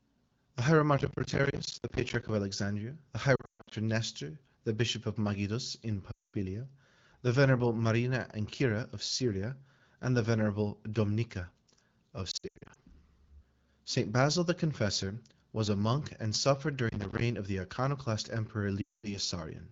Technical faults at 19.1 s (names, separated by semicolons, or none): lost AMR speech frames